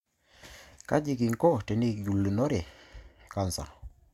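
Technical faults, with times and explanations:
No technical faults can be heard in this speech clip. There is nothing here to place at a time or explain.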